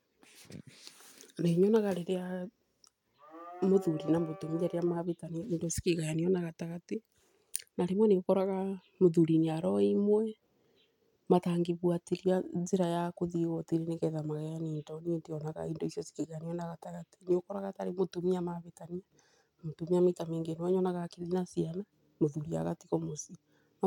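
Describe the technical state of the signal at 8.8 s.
At 8.8 s the speech signal is intact, with no technical fault at that point.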